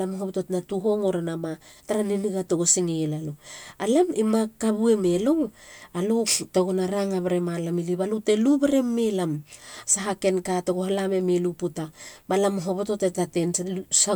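No dropouts, distortion, level jumps or other transmission faults can be heard anywhere in the recording.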